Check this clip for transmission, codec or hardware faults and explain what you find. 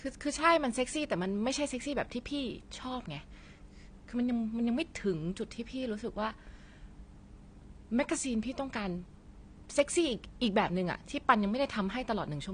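One codec fault runs through the whole recording. The speech has nothing above 9.6 kHz and plainly audible AAC compression damage, likely from low-bitrate AAC-LC around 32 kbps: too few bits forced a lowered cut-off and coarse spectral quantisation, leaving a dull, smeared sound with a warbling, fizzy edge on sibilants.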